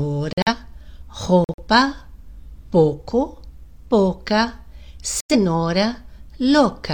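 Silence cuts in abruptly at 0.33–0.53 s, 1.44–1.62 s and 5.21–5.36 s. This is corrupt frame muted: the decoder rejected damaged compressed frames, and the player filled those spans with silence.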